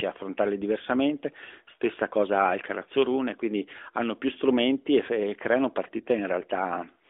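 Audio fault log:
1.46–1.50 s, lost AMR speech frame: radio errors corrupted a single stretch of data, about 20 ms long, which fits one frame failing its checksum. The decoder filled the gap by repeating the previous pitch and vocal tract settings at reduced gain. The result is a brief dip or warble in the speech, with no drawn-out fade, and the narrowband 12.2 kbps phone sound returns after the voice is briefly weak or rough.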